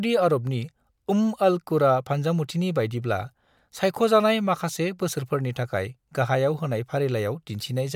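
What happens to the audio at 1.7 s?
Nothing goes wrong at 1.7 s; the speech carries on intact through that moment with no dropout, click or distortion.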